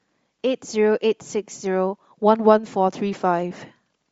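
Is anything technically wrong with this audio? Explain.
Yes. Throughout the speech there is plainly audible codec damage, with a breathy, grainy edge on the voice and a coarse, noisy top end. This is likely Bluetooth LC3 compression, the transform codec of LE Audio. At a low bitrate the encoder discards much of the upper spectrum and substitutes synthetic noise, which causes the hiss-like texture in place of real detail. The degree of damage fits a rate around 32 kbps with 10 ms frames.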